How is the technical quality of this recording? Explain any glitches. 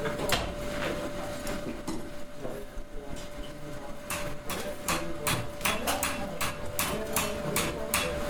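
No glitches turn up anywhere in the recording. Nothing in the audio calls for any technical explanation.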